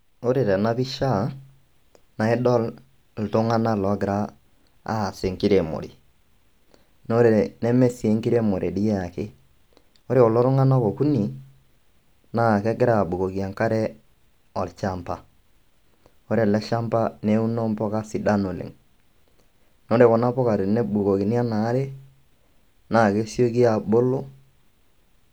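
Repeated frames at 7.06 s: one 32 ms compressed frame plays twice, a brief stutter just before "naa ore neme sii", lengthening the audio by 32 ms.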